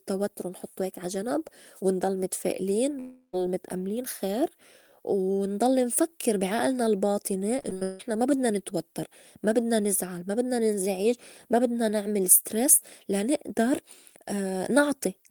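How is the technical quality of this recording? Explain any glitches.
Two network faults break up the speech. One is a single long gap, and the other is a short burst of repeated breakups.

Long network dropout, 2.99 to 3.35 s, just after "ونضل متفائلين". About 340 ms of audio is missing. For most of that gap the last sound is stretched into a fading buzz. The final 90 ms or so are plain silence. Speech then resumes, and the lost part never returns. The likely cause is a stall in the network stream, with the receiver patching the hole until it gave up.

Repeated packet loss, heard as robotic sound, runs from 7.59 to 8.01 s. It sits between "نفكّر بي عئلنا الباطني" and "ما بدنا نتوتّر ما". Six separate gaps fall in this short span. The longest is 161 ms, and about 260 ms is lost in total. Each gap is filled by repeating the preceding sound, so synthetic fill covers about 57 percent of the stretch. 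The result is choppy, with pieces of speech dropped.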